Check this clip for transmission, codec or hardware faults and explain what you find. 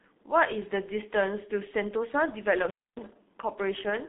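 Two faults are audible: heavy low-bitrate codec damage across the whole speech clip, and a brief dropout from an intermittent contact near the end.

The G.723.1 codec affects the clip from start to finish. The speech sounds muffled and hoarse, consonants smear together, and nothing is heard above about 3.8 kHz, with the band running from 200 Hz to 3.7 kHz. This codec models the voice in 30 ms frames and rebuilds it from a coarse, slowly updated description, which fits a bitrate around 6.3 kbit/s. That throws away the fine detail and high frequencies that make consonants crisp.

An intermittent contact fault occurs between 2.54 and 3.13 s. The audio crackles, then cuts out for about 270 ms, leaving only faint hiss before it crackles back in. This is a loose cable or plug momentarily losing connection. While the circuit is open the signal disappears, and the making and breaking of the contact produces the crackle at each edge of the gap.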